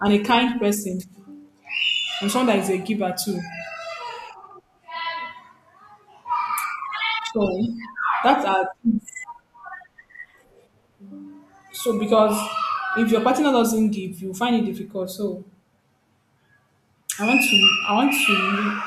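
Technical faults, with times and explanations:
Nothing stood out as a technical fault on listening to this speech recording.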